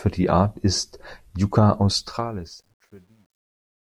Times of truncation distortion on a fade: 2.00-3.98

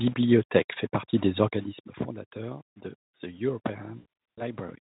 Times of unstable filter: none

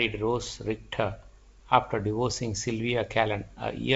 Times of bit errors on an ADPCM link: 2.30-2.34

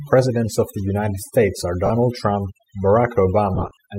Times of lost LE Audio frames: 1.86-1.90, 3.55-3.77

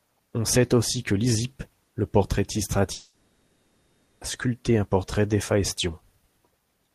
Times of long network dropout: 2.93-4.23

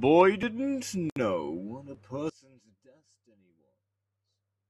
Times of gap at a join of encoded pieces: 1.10-1.16

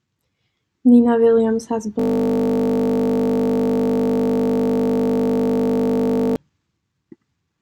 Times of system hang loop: 1.99-6.36

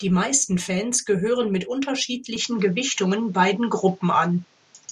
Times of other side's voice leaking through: none

